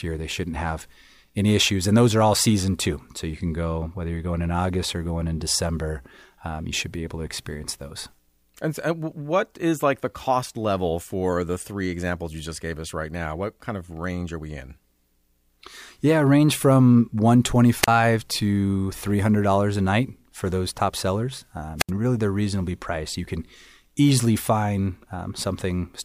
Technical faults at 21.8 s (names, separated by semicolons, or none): wireless microphone squelch dropout